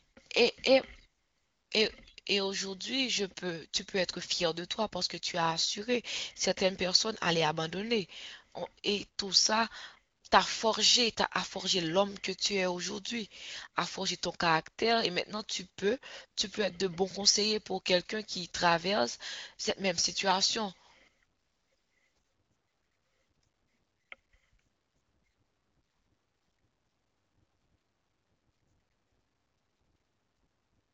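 Speech over HD Voice, with no faults heard.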